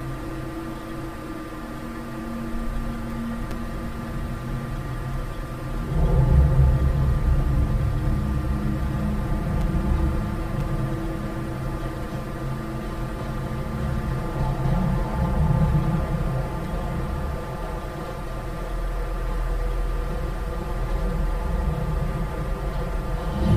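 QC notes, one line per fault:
Throughout: channel delay (comb filtering). One channel arrives roughly 5 ms late, and summing both to mono cancels shared content at evenly spaced frequencies, starting near 100 Hz and repeating about every 200 Hz, leaving a hollow, phasey tone with fixed notches.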